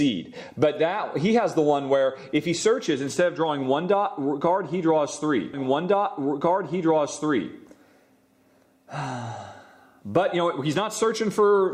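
At 5.53 s the playback jumps back and a stream segment is repeated: the player fetched or queued the same chunk of the stream twice, so the two seconds of sound ending at that point play again in full, running to 7.53 s and adding 2.0 s to the timeline. A small blip marks the jump back, where the end of one segment butts against the restarted copy, and everything after it arrives two seconds late.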